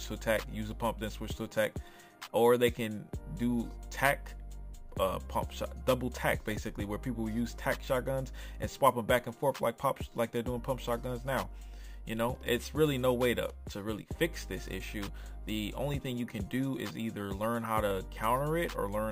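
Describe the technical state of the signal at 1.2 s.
At 1.2 s the sound carries imaging from sample-and-hold upsampling, present across the whole clip rather than at that moment alone. The rate was raised from 22 kHz to 44.1 kHz by simply repeating each sample, so a mirrored copy of the spectrum sits between about 11 kHz and 22 kHz, roughly 24 dB below the signal. It is heard as a bright metallic fizz that swells and fades with the sound. Unlike harmonic distortion, this top band moves opposite to the pitch.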